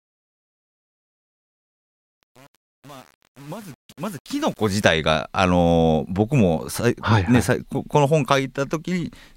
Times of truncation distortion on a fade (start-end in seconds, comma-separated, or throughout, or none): 0.00-4.85